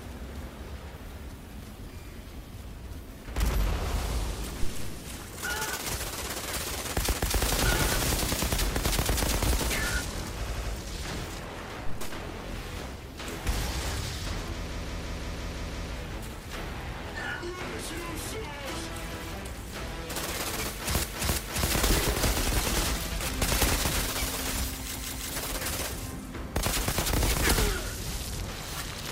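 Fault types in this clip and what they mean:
Phantom power thump: A supply voltage was switched on a live input, and the sudden DC step passed through the coupling capacitors into the signal. From 4.63 to 5.11 s this comes through as a deep, low-frequency thump that dies away with a decay of about 107 ms.
Repeated frames: Runs of compressed frames were delivered more than once, so the decoder replayed the same stretch of audio. The result is a stutter at 7.12 s (a 256 ms block heard twice), 10.45 s (an 85 ms block heard four times), 14.72 s (a 171 ms block looping eight times), 21.03 s (341 ms, three times) and 24.96 s (171 ms, three times). The repeats add about 2.7 s in all.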